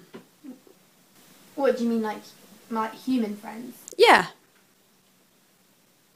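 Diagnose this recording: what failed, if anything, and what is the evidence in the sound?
Nothing in this recording stood out on listening that would point to a failure at any stage of the chain.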